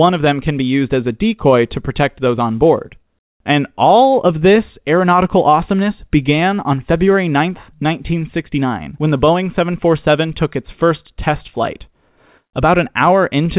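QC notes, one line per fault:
throughout: clock drift between sender and receiver. The sending clock runs around 4 percent fast, so audio arrives quicker than it is played out and the jitter buffer keeps overfilling, leaving small timing hiccups scattered unevenly across the speech, heard over a narrowband call path cut off at 4 kHz.
0.1 to 13.38 s: repeated timing corrections. To hold the buffer steady against a sender running at 104 percent speed, the receiver keeps trimming short slices of audio, always in the same direction and at irregular spacing, so the pacing sounds faintly uneven, with slight skips.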